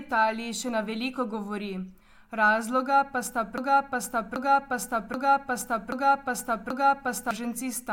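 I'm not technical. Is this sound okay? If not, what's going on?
No. After "pa sta", a 0.78-second snippet repeats five times from 3.58 to 7.31 s. This is a broken-record loop, likely from playback stalling on its last piece.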